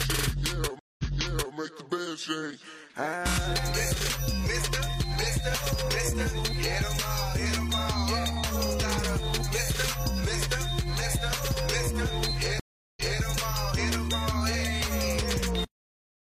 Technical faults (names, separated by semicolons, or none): stream reconnect; cut-off end